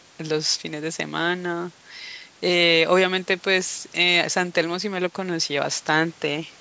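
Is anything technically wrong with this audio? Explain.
No, nothing is technically wrong: the speech has been through a call's microphone processing, which rolls off the lowest bass, and that is normal for this kind of path.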